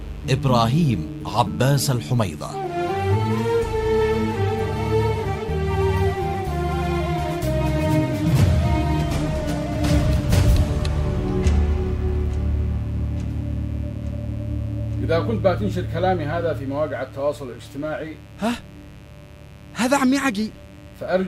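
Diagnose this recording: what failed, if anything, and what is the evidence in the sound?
A steady, raspy buzz sits under the sound from start to finish, roughly 30 dB below the programme level. This is mains buzz, and it points to the analogue wiring stage. Its harmonic series is built on 50 Hz and extends well up into the kilohertz range. That spread comes from sharp switching spikes, such as a dimmer, a rectifier or a missing shield, leaking into the signal path twice per mains cycle.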